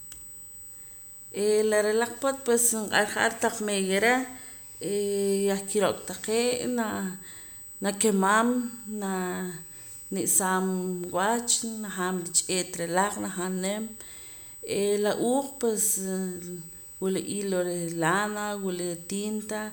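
A thin, fixed-pitch whine runs under the speech from start to finish, centred on 8 kHz with its strongest component an octave up at 16 kHz, sitting roughly 15 dB below the speech. This is USB whine. The bus draws current in 125-microsecond microframes, an 8 kHz rhythm, and that pulsing leaks through the shared power or ground into the audio path. It leaves a steady high tone and its harmonic riding under the recording.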